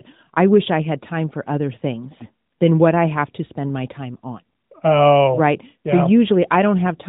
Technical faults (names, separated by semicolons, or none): none